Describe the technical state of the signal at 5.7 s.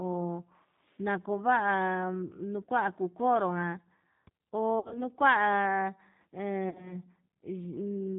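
At 5.7 s the speech carries G.729 codec damage, which runs through the whole clip. The sound fits G.729A at 8 kbit/s. The codec does not store the waveform. It rebuilds each 10 ms frame from a vocal tract filter, a pitch predictor and a few sparse pulses. Nothing above 4 kHz survives, so the top end is cut off. The damage is plainly audible. The speech sounds rough and synthetic.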